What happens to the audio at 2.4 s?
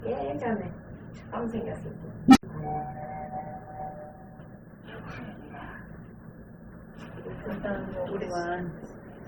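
An unstable filter runs away from 2.28 to 2.43 s. A low tone around 300 Hz swells within about 70 ms, clips, then drops into 80 ms of silence. Throughout, the audio carries smeared, band-limited artefacts from two different codecs, likely transcoding between lossy codecs, MP3 then Opus.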